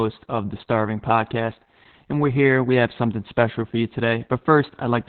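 Speech throughout carries heavy Opus voice compression: nothing above 4.3 kHz, with a hoarse, slightly robotic texture that plain low-pass filtering wouldn't add, which points to narrowband SILK near 8 kbps.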